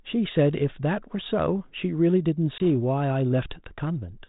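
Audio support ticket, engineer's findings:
Packet loss on an ADPCM call, 2.58 to 2.66 s: hard-edged 20 ms silent gap, about one packet, then slightly distorted speech. Decoder's adaptive predictor and step size drift from the sender's over the hole and resync within tens of ms. Suspect the network path, not the 32 kbit/s G.726 link.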